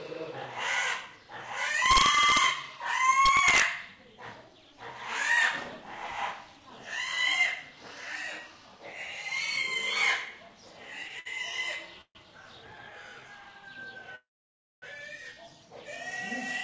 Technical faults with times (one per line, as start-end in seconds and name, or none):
1.86-2.44 integer overflow
3.25-3.62 integer overflow
11.08-11.27 short stall from a late packet
12.01-12.17 call audio freeze
14.15-14.84 call audio freeze